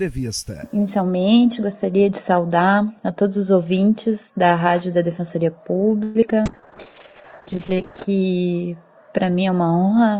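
At 6.03 s the sound stops advancing for about 116 ms, until 6.17 s. The last moment of audio is stretched into a fading buzz or hiss over that span, and playback then resumes exactly where it left off, so nothing is lost and the clip is simply delayed by that amount. This is a call audio freeze, likely caused by packets stalling in transit until the jitter buffer ran dry and the receiver had to extrapolate.

Short concealed packet loss follows twice, at 6.21–6.24 s and 6.30–6.32 s, with roughly 20 ms of audio missing each time. The receiver covered each hole by extending the preceding sound, only 9 ms and then just 1 ms of synthesised fill, and crossfaded back into real audio. Each one is heard as a tiny smear or wobble. The second loss also takes back around 20 ms of the delay the freeze had added.

From 6.42 to 6.69 s a jitter buffer slow-down stretches the sound by 41 ms, playing it at about 88% of normal speed with the pitch unchanged. 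The receiver was rebuilding its reserve by duplicating individual pitch cycles and bits of pause. The result is a drawn-out passage.

Overlapping that, from 6.47 to 8.12 s, a call bitrate drop coarsens the coding. The sound points to the encoder falling from around 48 kbps to about 6 kbps after the bandwidth estimate collapsed, and it holds at that floor for about 1.55 s. Audio bandwidth shrinks from 20 kHz to 8 kHz, so the top end goes dull and muffled with a rough, watery texture until quality returns at 8.12 s.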